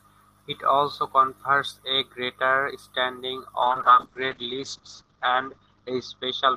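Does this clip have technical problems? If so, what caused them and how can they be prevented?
Yes. A call bitrate drop begins at 3.62 s and runs to the end. The network's bandwidth estimate fell, so the encoder went from 32 to 8 kbps, staying at its lowest for 1.76 s. It coarsened the coding and narrowed the audio band from 20 kHz to 8 kHz, leaving the speech rough and muffled. A steadier connection, or a bandwidth floor for audio, would prevent this.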